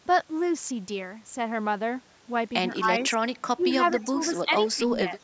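The speech dips by about 10 dB at 2.79–2.89 s and 3.58–4.2 s, then more lightly at 4.45–4.51 s, and again at 4.75–4.89 s and 5.08–5.15 s. This is likely speech suppressed in double talk, where the canceller ducks the talker while the far side also speaks. Overlapping these dips, a faint copy of the far side's voice comes back 209 ms late at 3.59–3.64 s, 3.9–4.33 s (strongest, about 15 dB down) and 4.6–4.76 s. This is likely echo leak, with loudspeaker pickup slipping past the echo canceller.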